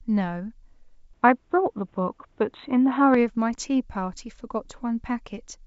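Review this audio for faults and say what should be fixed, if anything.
From 1.13 to 3.14 s the speech turns dull and boxy, losing everything above 3.9 kHz against the roughly 7.7 kHz G.722 band around it. The level shifts by around 5 dB, a faint new noise floor appears, and there is no gap. This is likely an input switched to a poorer device. To prevent it, pin the recording input to one device and disable automatic switching to headset call profiles.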